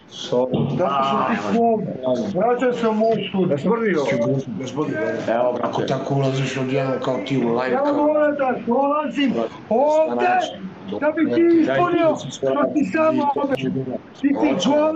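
No technical faults can be heard anywhere in it.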